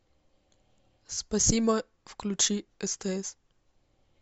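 At 3.28 s the speech lurches forward slightly, as if a sliver of sound had been snipped out. This is compressed frames skipped: one frame of the encoded audio, missing from the file or refused by the decoder as damaged, never played. A frame length of 23.2 ms fits a 1024-sample frame at 44.1 kHz, so around 20 ms of sound drops out.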